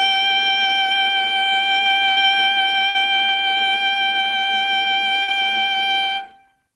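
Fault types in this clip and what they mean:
Burst of packet loss: At 2.11 to 2.20 s, 2.89 to 2.97 s and 5.22 to 5.31 s the music briefly freezes into a held, fading smear of the last sound, then jumps ahead. Each time a run of packets failed to arrive, so the receiver extended the last audio for about 50 to 60 ms while turning it down, and roughly 60 ms of the music between that point and the resumption is gone.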